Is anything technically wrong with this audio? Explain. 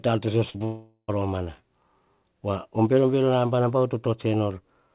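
Yes. Just after "ar to so", from 0.50 to 0.56 s and again from 0.58 to 0.62 s, the speech briefly smears and wobbles. These are short concealed packet losses: about 40 ms and then 20 ms of audio never arrived, so the receiver extended the preceding sound from its pitch or as shaped noise before blending back into the real signal.

From 0.64 to 1.10 s a buzzy or hissy continuation of the last sound fades away, ending in a brief silence of about 40 ms before the speech resumes with a section missing. This is likely a long network dropout. Nearly half a second of audio went absent, and the receiver's concealment filled the gap with synthetic sound that decayed toward nothing.

The band limit at 4 kHz, typical of a G.711 mu-law telephone path, shapes the sound throughout.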